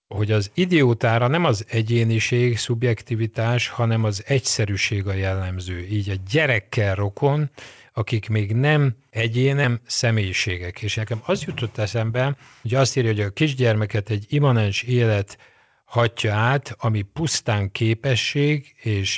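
At 9.64 s a stretch of speech was dropped while newer audio was already queued. This skip ahead leaves out roughly 0.7 s with no fill. The speech on either side is spliced almost directly, so the talker seems to leap forward mid-phrase, and a syllable or more simply vanishes without any pause marking the cut.

Right afterwards the jitter buffer was still holding more audio than its target, so it trimmed away tiny pitch-period slices again and again to bring the delay back down. This jitter buffer speed-up runs from 9.74 to 11.31 s at about 114% speed, removing roughly a fifth of a second, and again from 11.79 to 13.12 s at about 107%, removing roughly a tenth, ending just before "a kisgyermeket egy imanens". The pitch stays put, but the delivery sounds rushed, more noticeably in the first stretch. Throughout, the band stops at 8 kHz, which fits a wideband call codec such as G.722.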